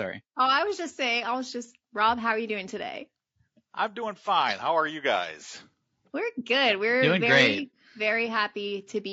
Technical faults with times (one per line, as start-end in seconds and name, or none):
0.00-9.12 low-delay AAC compression